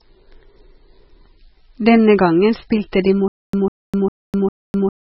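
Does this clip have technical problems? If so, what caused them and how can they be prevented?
Yes. Throughout the clip, the speech was most likely squeezed through an MP3 encoder starved of bits, which fits a very low bitrate of around 16 kbps. With so little to spend, the encoder discarded everything above 5.6 kHz and dropped weak frequency lines that flicker in and out between frames. The speech sounds dull and muffled, with a watery, swirling texture and smeared consonant attacks. Encoding at a much higher bitrate, or using a codec built for low-rate speech, prevents this.

From 3.28 s to the end, the stutter with silent gaps likely comes from a stalled player or stream. Each time it retried, it replayed its last fragment and then ran out of data. A burst of about 0.15 s repeats four times, every 0.40 s, with about 0.25 s of digital silence after each. The sound that belonged in that stretch is gone. 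Larger playback buffers and a stable delivery path that doesn't starve the decoder prevent this.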